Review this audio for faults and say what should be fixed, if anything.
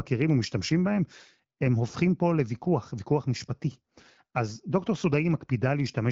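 No faults turn up in this audio, so nothing needs to be fixed.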